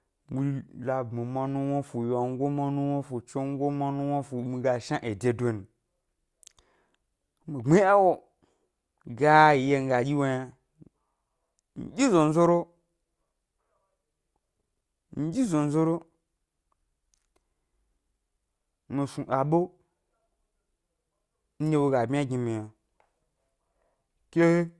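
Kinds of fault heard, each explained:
No technical faults can be heard in this recording.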